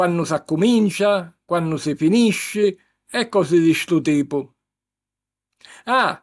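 Nothing goes wrong anywhere in this stretch of speech; there's simply no technical fault to point to.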